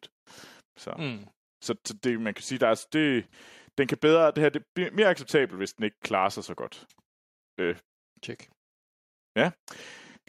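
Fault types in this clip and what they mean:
Nothing stood out on listening to this speech recording.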